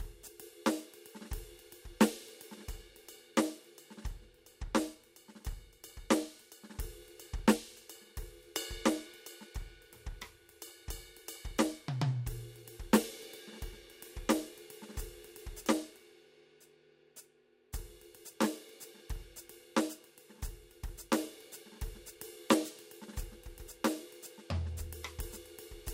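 No technical faults detected.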